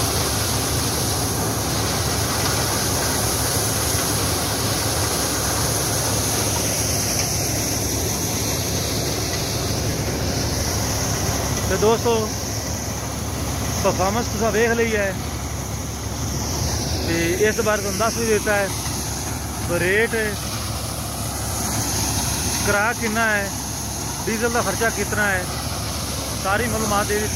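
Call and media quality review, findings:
Regular ticking over the audio, 9.40–11.59 s: train of clicks, 13.3 per second, around thirty near-identical pulses peaking a few dB above programme level. Likely cause: electrical interference or a struggling interface injecting periodic pulses.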